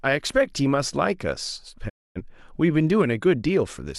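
At 1.88 s the speech fades out over about 20 ms into a digital broadcast dropout. The receiver stopped getting usable frames, muted, and came back at 2.21 s. The speech sent in between, about 256 ms of it, is simply missing, which fits six or so failed frames. On a waveform there is a short taper and then a flat line. A spectrogram shows a clean vertical gap across all frequencies.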